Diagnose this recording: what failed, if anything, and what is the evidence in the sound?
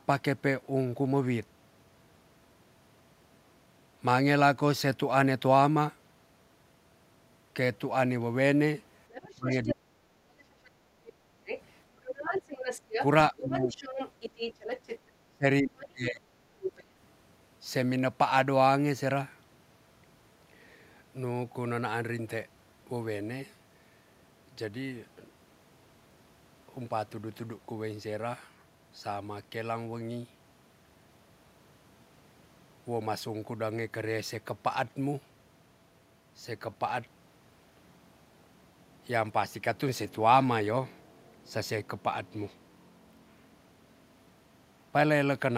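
Call processing failed, in the echo canceller. A second, fainter voice runs under the main talker from 9.1 to 9.74 s, about 10 dB down, then from 10.65 to 14.99 s and again from 16.63 to 16.84 s, only about 5 dB down. This is the other side's voice leaking through: the loudspeaker's output reached the microphone and was likely not fully subtracted. Unlike crosstalk in wiring, it comes and goes with the far end's speech.

Speech suppressed in double talk appears while the far side was playing. The main talker sinks sharply from 9.36 to 10.27 s, by roughly 40 dB at its deepest, for about 0.7 s in all; more mildly from 13.31 to 13.76 s, roughly 15 dB over about 0.3 s; and from 15.29 to 16.25 s, roughly 25 dB over about 0.7 s. The canceller, likely unable to separate near talk from echo, attenuated both. Packet loss would cut cleanly regardless of overlap; the first two dips line up with the leaking voice.

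Background gated by the echo canceller shows as a brief dip in the room sound from 11.16 to 11.29 s, about 6 dB deep and lasting around 150 ms, while the loudspeaker was active. The suppressor clamped the microphone and then released it. A noise gate would key on the near talker's level. This dip follows far-end activity and recovers once the canceller lets go.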